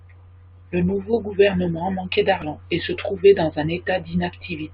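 At 2.42 s, right after "nouveau gouvernement manquait" and before "et se trouvait dans", damaged data in the compressed stream makes the decoder misread a frame and resync, giving a brief glitch. It shows as a thin broadband vertical smear and an abrupt waveform discontinuity.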